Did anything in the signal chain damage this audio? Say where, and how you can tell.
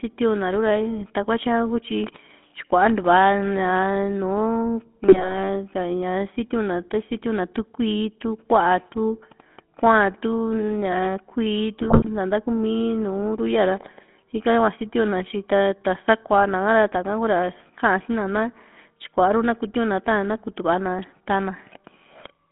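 Yes, at the codec stage, for the whole 22.5 s. The speech has the gravelly, buzzy texture of the GSM full-rate codec, with content confined to roughly 200 Hz to 3.5 kHz. The damage is plainly audible and fits a 13 kbps GSM full-rate stream. The codec rebuilds the voice from a vocal-tract filter driven by a sparse, regularly spaced pulse excitation, which decimates fine detail and imposes that rasping, synthetic roughness.

There is also damage at the network stage, from GSM bit errors at 5.08 to 5.35 s and again at 11.78 to 12.09 s. In both windows the speech briefly breaks into squawks and gargling level jumps, the sound of corrupted parameters reaching the decoder. Flipped bits in the filter, pitch or gain fields distort the spectrum or inflate the level for each affected frame. The second burst is longer, which fits a few percent of bits flipped on a weak radio link.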